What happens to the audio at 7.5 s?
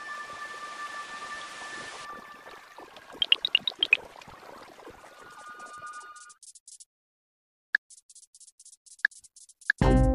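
Nothing goes wrong at 7.5 s; the audio carries on intact through that moment with no audible fault.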